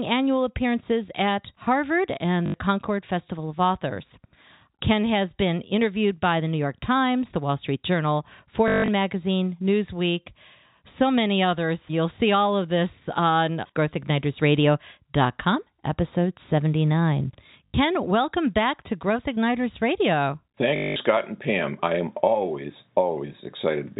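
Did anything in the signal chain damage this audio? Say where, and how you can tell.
Yes, at the network stage. Packet loss with last packet repeated occurs at 2.46–2.54 s, 8.68–8.88 s, 17.66–17.74 s before "welcome back to", and 20.76–20.96 s. The receiver replays the last fragment, which fits 20 ms packets. Longer runs buzz near 50 Hz.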